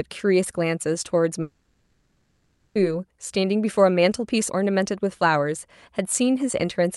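From 1.41 s to 2.77 s the speech drops out for about 1.34 s, most likely a long network dropout on the call path. The receiver fills the gap by stretching the last received sound into a buzzy, fading tail, and only the final 20 ms or so falls to silence before the speech resumes. The audio in that stretch never arrives, so the speech picks up past the lost section rather than where it stopped.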